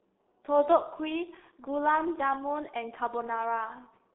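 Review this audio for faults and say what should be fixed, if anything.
The speech has passed through a G.723.1 codec for its whole length, and the damage is heavy. The codec models the voice in 30 ms frames at a very low rate, and the coarseness fits its 6.3 kbit/s mode. The line band runs from roughly 250 Hz to 3.7 kHz, with nothing above 3.8 kHz. The voice sounds muffled and hoarse, and consonants smear because the slow model can't follow fast changes. To prevent this, carry the call over a wideband codec such as Opus or G.722, and avoid G.723.1 anywhere in the path.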